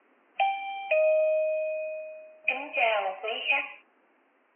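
No technical faults can be heard anywhere in the recording.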